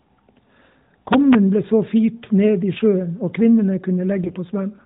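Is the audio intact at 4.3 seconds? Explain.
No, there's a short burst of AMR bit errors from 4.24 to 4.36 s: flipped, less-protected codec bits misplace pulses and skew gain and spectrum, so it turns scratchy and gargly.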